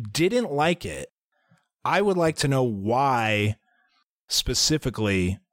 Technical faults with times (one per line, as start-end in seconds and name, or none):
none